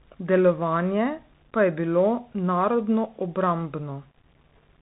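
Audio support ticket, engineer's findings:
Grainy, signal-following distortion across the whole clip. Quiet passages and decays turn gritty, with the error about 40 dB below the signal. The likely cause is low bit depth without dither: a stage rounding to roughly 9 bits, so the error tracks the signal instead of spreading as smooth hiss. On a waveform, low-level segments look stair-stepped. On a spectrogram, distortion products smear alongside the harmonics rather than forming a flat noise floor.

Narrowband, scratchy speech throughout, with a granular hiss underneath and sibilants rough and splattery. This points to the Bluetooth CVSD headset codec, consistent with a 64 kbps one-bit delta link. Damage is plainly audible: loud, fast transients outrun the adaptive step and distort. On a spectrogram, a hard ceiling at 3.8 kHz with nothing above it, and diffuse grain filling the band. On a waveform, slope-limited, slewed attacks.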